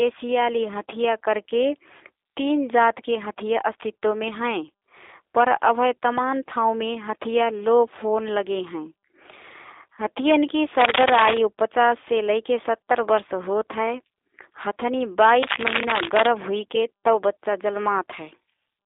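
G.729 codec damage runs through the whole recording. The speech is rebuilt frame by frame from a vocal tract model, a pitch predictor and a few pulses, and that leaves it slightly rough and synthetic, with an obvious coding character that fits an 8 kbit/s VoIP link. The line band stops near 300 Hz at the bottom and nothing passes above 3.7 kHz.

Cable scratch noise runs from 15.42 to 16.29 s. Dense, uneven bursts of scratching and rustling sit over the speech, a little louder than it. The likely cause is a worn cable, connector or control being moved, so that its contact resistance changes rapidly.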